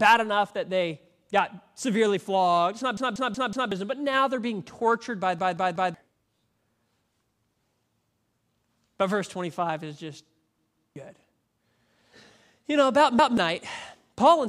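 Speech with a repeated-buffer stutter at 2.97–3.72 s before "but now they're being", 5.39–5.94 s after "they're being tortured by", 10.59–10.96 s, and 13.19–13.38 s after "know about". Each time a chunk of about 186 ms replays with hard joins, which fits an 8192-sample buffer not getting fresh audio in time. Up to roughly 0.7 s of the real audio goes missing.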